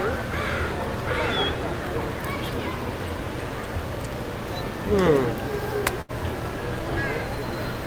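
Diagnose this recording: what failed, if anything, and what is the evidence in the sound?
A network fault: a burst of packet loss at 6.01 to 6.12 s. Several consecutive packets never arrived in time, so the receiver's concealment stretched the last good sound over roughly 71 ms, fading it, and then jumped ahead. About 60 ms of the original audio is simply gone. On a spectrogram the final frame appears smeared horizontally and dimming, followed by a hard vertical edge where real audio resumes. The waveform shows a decaying repetitive stretch.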